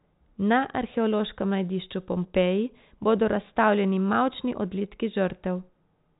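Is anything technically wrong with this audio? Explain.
No, nothing is technically wrong with this audio, which is speech carried as ordinary G.711 telephone coding with nothing above 3.8 kHz.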